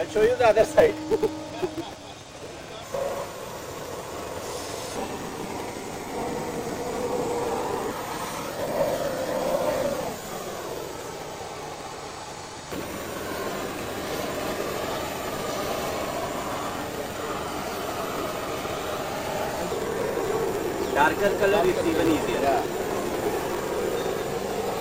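A filter restarted on every block runs through the whole clip. The filter discards its internal state at each block boundary and starts again from silence, so every block opens with a small transient. Those transients repeat at 200 Hz, which points to blocks about 5 ms long, and they merge into a steady buzz at that pitch. The buzz rises and falls with the level of the sound, louder in strong passages and fading in quiet ones.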